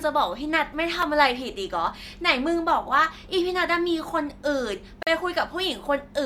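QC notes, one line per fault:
1.02 s and 5.03–5.07 s, gap between stream segments: two hard-edged silent dropouts, 3.4 ms then 40.9 ms, four seconds apart. Adjacent segment timestamps fail to meet, so the player pads the hole with silence; the sound stops abruptly and resumes intact.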